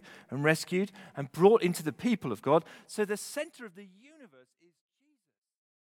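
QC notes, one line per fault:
No technical faults are present in this speech clip; the level eases down in a smooth editorial fade-out from around two and a half seconds to the end, with no click or hard edge where it finishes.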